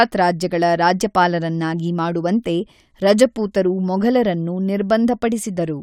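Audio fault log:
No technical faults are audible anywhere in this speech recording.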